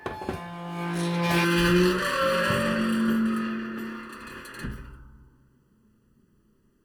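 From 1.45 s to the end the sound turns hollow and phasey. This is channel delay (comb filtering): one channel lags by under a millisecond, and mono summing carves evenly spaced notches starting near 700 Hz.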